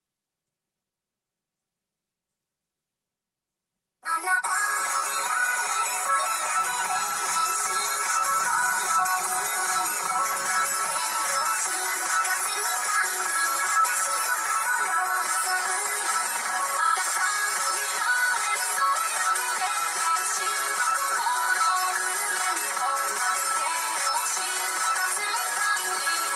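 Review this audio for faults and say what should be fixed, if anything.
Channel delay (comb filtering) runs throughout. One channel lags about 5 ms, so the mono sum cancels near 100 Hz and every 200 Hz above, sounding hollow. Fix it by time-aligning both channels before any mono fold-down.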